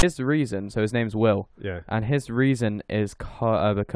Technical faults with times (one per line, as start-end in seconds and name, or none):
0.00-0.03 file tags played as audio